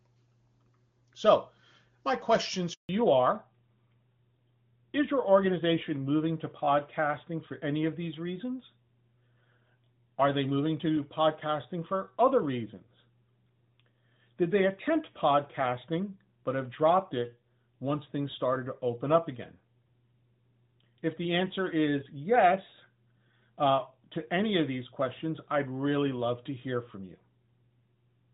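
A speech call, clear wideband HD Voice at first, hits a handover gap after "my questions" from 2.73 to 2.89 s. The sound dies out within milliseconds, leaving 160 ms of flat waveform and a blank vertical band on the spectrogram. From 2.89 s to the end comes a fallback to narrowband, which fits a switch to a narrowband AMR codec. The spectrogram is cut off sharply at 4 kHz, and the voice sounds duller.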